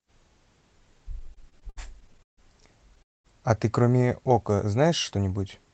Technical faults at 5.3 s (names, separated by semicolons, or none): none